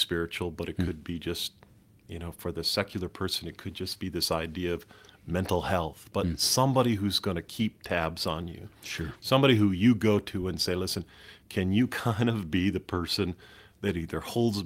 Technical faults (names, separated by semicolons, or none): lost packet rebuilt from error correction